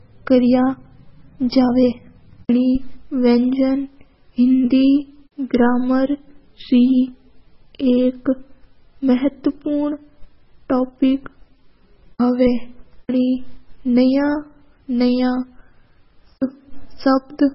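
MP3 compression runs through the whole clip: the speech has a watery, swirling quality, and nothing remains above 5.6 kHz. This is likely an MP3 encoder starved of bits, at a rate that fits around 16 kbps, zeroing weak frequency lines so they flicker between frames and cutting the treble. The damage is heavy.

Pre-echo appears at 12.18 s as a brief hiss, about 17 ms long, just before a sharp attack. The codec spread the quantisation noise meant for the loud onset across its whole block, so the noise also fills the quiet moment ahead of it and softens the attack.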